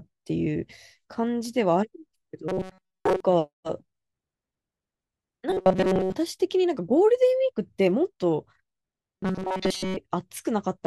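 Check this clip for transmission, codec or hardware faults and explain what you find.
Robotic sound from repeated short buffers occurs at 2.48–3.20 s, 5.50–6.15 s and 9.18–9.97 s. The speech becomes a rigid metallic buzz near 188 Hz. Most of the real audio is likely skipped while a roughly 5 ms buffer repeats.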